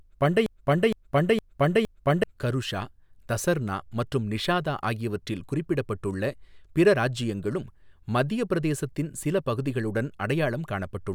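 From 0.46 s to 2.23 s the speech stutters mechanically: a single fragment about 0.46 s long plays four times back to back, identical each pass, so it sounds like a stuck broken-record loop rather than a natural repeat. The cause is likely a stalled player, encoder or stream that kept re-sending the last chunk it held. Whatever should have been heard during those 1.8 seconds is missing, replaced by the copies.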